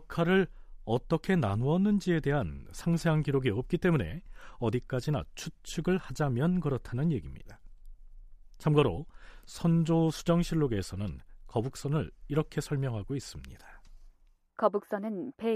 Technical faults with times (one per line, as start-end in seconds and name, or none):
none